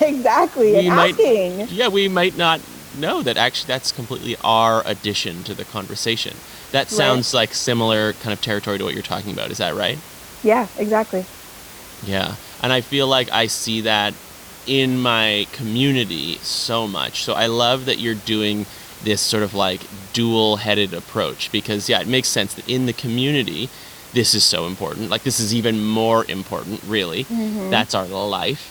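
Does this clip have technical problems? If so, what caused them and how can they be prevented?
No, this clip has no technical problems, so there is nothing to prevent.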